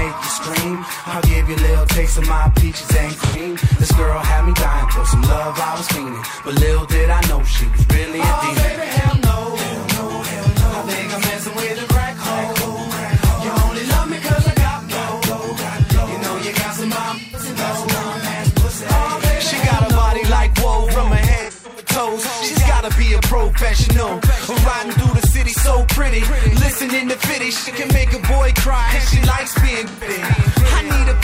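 AAC frame loss with concealment occurs five times: at 3.24, 17.20, 21.43, 27.56 and 29.88 s. Each time, a stretch of coded audio goes missing. The decoder patches it from the last good spectrum. The gaps last about 85 ms, 128 ms, 256 ms, 85 ms and 128 ms. The 21.43 s loss is broken up across about 0.34 s, with its longest run around 150 ms. Each patch sounds briefly smeared, noisy or phasey.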